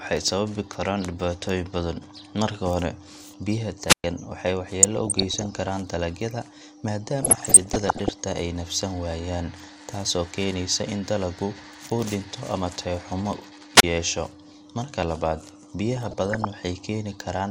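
The whole speech clip sounds dull and granular, with a plainly audible gurgle. That is the sound of likely MP2 compression at a low rate, around 80 kbps. Upper sub-bands drop out, and what remains is coarsely quantised.

From 3.87 to 4.04 s comes a wireless microphone squelch dropout. The radio signal fades and hiss rises. The receiver then mutes for about 116 ms, leaving a hole before the speech returns.

From 4.83 to 5.68 s, DAB burbling appears. Bit errors slip past error correction into the audio data. Wrong samples put short blips of noise into single sub-bands. It returns from 7.20 to 8.19 s, ending just before "ay neefsan waayaan taasoo". It comes back once more from 15.97 to 16.45 s.

A second, shorter squelch dropout follows "dhinto ama tayo xumo" at 13.76 to 13.83 s. Here the mute lasts only about 31 ms.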